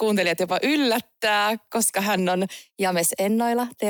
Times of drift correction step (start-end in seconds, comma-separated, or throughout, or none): 2.29-3.89